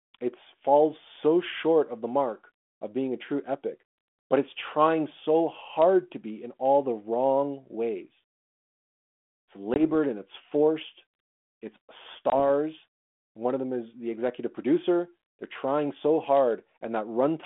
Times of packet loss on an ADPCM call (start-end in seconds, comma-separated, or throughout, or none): 9.74-9.81, 12.30-12.41